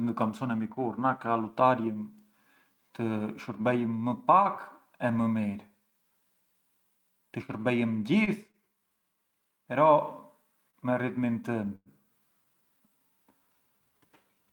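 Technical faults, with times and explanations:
8.24–8.30 s, 8.51–8.57 s, 10.71–10.76 s: short stall from a late packet. Each time a packet arrived late, the last sound was stretched by about 28 ms. The speech then resumed without loss, sounding briefly held.
11.75–11.89 s: call audio freeze. The sound is held as a fading buzz for about 103 ms, then 30 ms of silence. The speech then resumes intact, likely after delayed packets emptied the jitter buffer.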